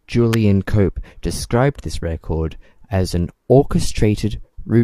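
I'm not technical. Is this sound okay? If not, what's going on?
No. There's an electrical switching spike at 0.33 s: a sharp snap, very brief and very loud. It sits on top of the speech. It was likely caused by a nearby switch, motor or static discharge making a tiny electrical spark that the audio cable or equipment picked up as a sudden jolt, much like the crackle a radio makes when a light is switched on.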